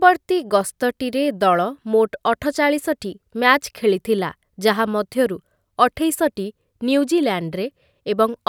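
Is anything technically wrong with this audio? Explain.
No, nothing technically wrong can be heard in this speech clip. There is no fault to point to at any moment in it.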